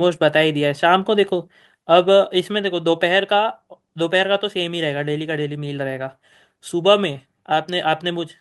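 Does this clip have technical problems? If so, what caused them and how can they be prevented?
Yes. At 7.53 s the speech and background drop by about 2 dB in one step, a microphone volume stepped down, likely by call software reacting to a loud or clipping input. Setting the input level lower beforehand and disabling automatic microphone adjustment prevents it.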